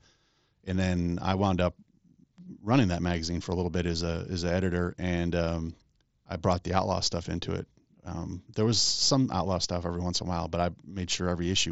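No technical faults can be heard in this speech.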